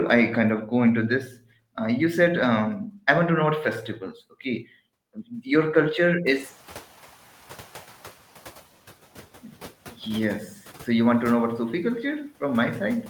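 At 1.25 to 1.4 s, just after "kind of go into" and before "uh you said", the noise suppressor cuts the speech: it mistakes quiet speech for background and pulls it down by up to about 12 dB for roughly 150 ms. That stretch sounds swallowed and faint. On a waveform the envelope dips sharply, and the spectrogram shows speech energy fading into a darker gap.

From 6.26 to 8.21 s the noise suppressor is catching up. Room noise jumps by about 23 dB around 6.5 s and settles about 22 dB below the speech. The suppressor's noise estimate lags for 1.95 s, so the noise comes through at first and then sinks by about 7 dB as the estimate adapts. A spectrogram shows a brighter noise floor that dims gradually across that span.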